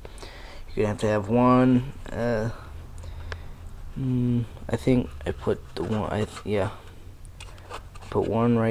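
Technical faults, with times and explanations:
Nothing technical stands out here at all; there's no fault to point to anywhere in the clip.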